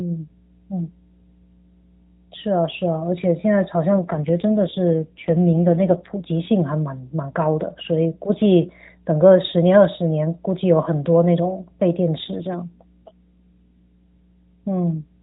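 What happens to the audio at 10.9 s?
At 10.9 s the speech carries mains hum, as it does throughout the clip: a steady 60 Hz tone, roughly 25 dB below the speech, coupled in from the power line through a ground loop or nearby transformer. On a spectrogram it is a constant horizontal line at 60 Hz with some low harmonics, running beneath speech that stops at the 4 kHz narrowband ceiling.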